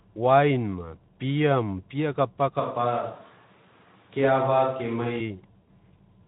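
A switch to a distant microphone runs from 2.60 to 5.21 s. The speech abruptly turns roomy and hollow and loses some bass, then snaps back just as suddenly. The level barely changes, but background noise rises to roughly 35 dB below the speech. The likely cause is that the close microphone's signal dropped out and a farther microphone, such as a camera's, filled in for those seconds.

VoIP packet loss concealed by the speech codec occurs at 3.13 to 3.19 s, inside that distant stretch, and again at 5.61 to 5.67 s. Each time, the decoder had no data and extended the last pitch and spectral shape while lowering the gain. The speech smears into a buzzy tone or coloured noise that fades, and stays weakened briefly after data returns. The second gap sounds longer and fits roughly 60 ms of missing audio, against about 40 ms for the first. Both come through the lightly coloured Speex coding.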